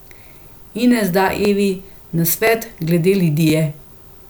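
The audio was handled in one-second chunks, and each chunk began about 23 ms before the previous one had finished, so that sliver of speech plays twice at every join. These overlapping chunks land at 0.43 s, 1.45 s, 2.47 s and 3.50 s, each lasting about 23 ms. Each repeat is heard as a brief click or tiny stutter, recurring steadily once per second.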